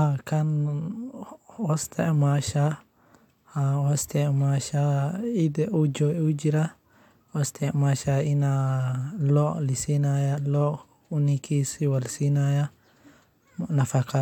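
Nothing in the speech stood out as a technical fault on listening.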